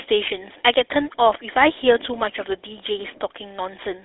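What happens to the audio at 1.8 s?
At 1.8 s the speech sounds buzzy and gravelly, squeezed into a narrow band of roughly 300 Hz to 3.6 kHz. This is GSM full-rate codec damage, present throughout the clip. The codec rebuilds the voice from a vocal-tract model driven by coarse regular pulses, which fits a 13 kbps rate and leaves the roughness plainly audible.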